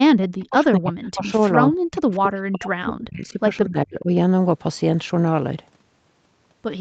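Speech with the voice repeatedly ducking and breaking up from 0.0 to 1.4 s, 1.68 to 3.4 s, and 3.65 to 4.11 s, dropping deeply at times. This is likely speech suppressed in double talk, with the echo canceller muting the near talker.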